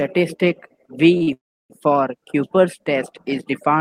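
At 1.17 s and again at 1.23 s, two back-to-back short stalls from a late packet hold the sound about 34 ms and 43 ms, then resume with nothing lost. From 1.33 to 1.72 s a call audio freeze follows, much longer: the sound trails off briefly as a fading buzz or hiss, then sits silent for about 310 ms before continuing, likely from packets held up in transit.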